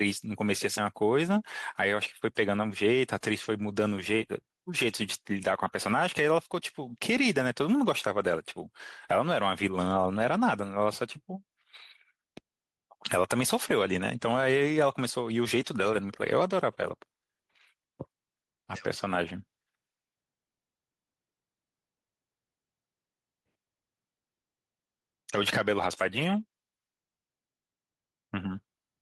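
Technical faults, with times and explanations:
Throughout, gain pumping: the level swings by about 5 dB, with loud and soft parts squashed closer together, likely from input gain set too high feeding a fast limiter.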